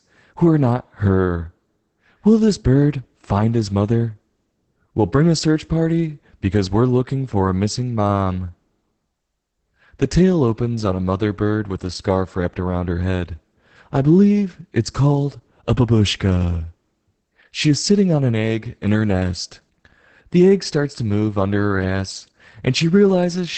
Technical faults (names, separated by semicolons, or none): Opus voice compression